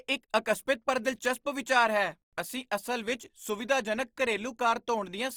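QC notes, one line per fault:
Throughout, Opus compression: the speech is plainly grainy and rough, with noisy texture on voiced sounds, though the bandwidth stays full up to about 20.2 kHz. The likely cause is Opus CELT mode filling bit-starved bands with folded or noise energy, which fits roughly 24 kbps.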